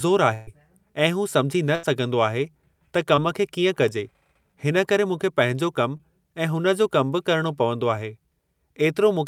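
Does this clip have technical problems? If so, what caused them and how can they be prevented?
Yes. A burst of packet loss occurs at 0.33 to 0.49 s, just before "ऐ हू सम्झी न", and at 1.75 to 1.85 s, just after "ऐ हू सम्झी न". The receiver stretched the last sound for about 140 ms and 80 ms while fading it, so a held buzz or hiss replaces the missing audio. Each gap is long enough that audio is skipped. Short concealed packet loss occurs at 3.15 to 3.19 s and 5.97 to 6.01 s, where about 20 ms was filled in and blended back. These sound like brief smears or wobbles rather than audible fades. A more stable network path, a larger jitter buffer and forward error correction would help the packets arrive in time or be recovered.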